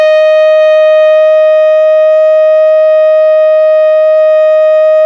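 Nothing technical goes wrong anywhere in this bit of music, so there's no fault to point to at any moment.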